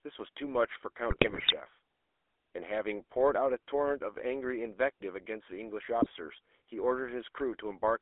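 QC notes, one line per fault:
Throughout, GSM full-rate codec: the whole clip has that buzzy, gravelly edge you get from the old full-rate coder, which fits roughly 13 kbps. It rebuilds speech from a vocal-tract model fed by a thinned-out, regularly spaced pulse excitation, so the fine texture turns rasping. Add the phone-line band of about 300 Hz to 3.5 kHz and everything sounds boxy and thin, with no low body and no air on top.
1.1 to 1.54 s and 6.0 to 6.1 s, GSM bit errors: two bursts where the sound breaks into squawks, pops and gargling. Corrupted bits are reaching the decoder, so the filter, pitch and gain values it uses for each frame are wrong. The spectrum bends and the level jumps from one frame to the next. The first burst is longer and messier, spanning 21 bad frames. The second is a short blip of just a few frames.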